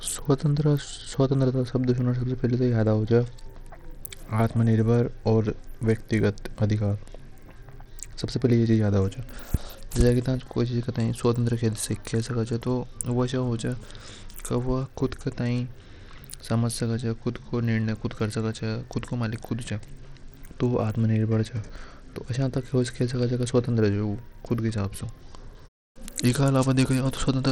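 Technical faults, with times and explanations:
Throughout, Bluetooth SBC compression: the speech carries plainly audible gritty noise and a treble that thins and flickers, likely from an SBC link whose small bit pool fits about 80 kbps, starving the upper sub-bands and coarsely quantising the rest, with aliasing riding on top.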